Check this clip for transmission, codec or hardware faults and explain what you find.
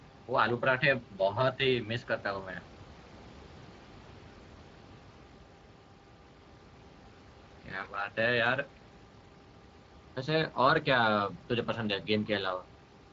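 One fault runs through the whole speech clip, Speex codec damage that is plainly audible, heard over room noise sitting about 23 dB below the speech.

Throughout the clip, the Speex CELP coder's sparse excitation coding, which fits a bitrate near 20 kbps, roughens the speech into a hoarse, noisy texture. A spectrogram shows grainy, smeared harmonics.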